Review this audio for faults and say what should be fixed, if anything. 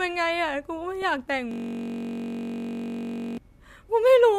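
DAB burbling appears at 1.02 s as a brief watery blip in the speech. Bit errors slipped past the error correction into the MP2 data, so wrong samples and scale factors made individual sub-bands jump in level, and the damage is short enough to fit a frame or two. A spectrogram would show isolated bright rectangular patches confined to narrow sub-band strips. Preventing it means improving reception with a better antenna or stronger multiplex, or muting corrupted frames rather than decoding them.

A system hang loop runs from 1.51 to 3.38 s. The computer or driver stalled while the sound hardware kept replaying the same ring buffer, so one 21.33 ms slice of audio repeats exactly, which fits a 1024-sample buffer. At 46.9 Hz it sounds like a steady buzz, not a stutter. The waveform shows one identical short shape tiled across the span, and a spectrogram shows a harmonic comb of horizontal lines spaced at 46.9 Hz. 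Preventing it means fixing the driver or system stall and having the audio path output silence when the buffer stops being refilled.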